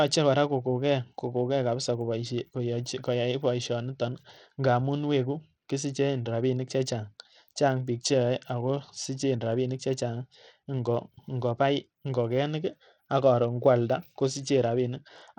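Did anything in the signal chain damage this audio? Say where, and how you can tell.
Yes. At the codec stage, the speech was most likely squeezed through Bluetooth SBC compression at a low bit rate, consistent with about 80 kbps. Throughout, the treble thins and flickers while a gritty, aliased haze rides on the voice, because starved upper sub-bands get few bits and coarse quantisation.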